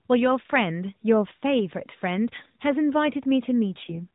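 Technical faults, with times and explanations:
3.80–4.07 s, AMR rate drop: the speech turns rougher and more synthetic for about 0.28 s, with no gap and no change in bandwidth. This fits the narrowband mobile codec stepping down from its light-sounding 12.2 kbps mode to about 4.75 kbps. With fewer bits to code each 20 ms frame, the excitation pulses are modelled more coarsely, so the voice sounds buzzier until the higher rate returns.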